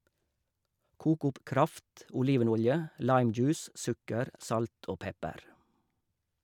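No technical faults are audible anywhere in the speech.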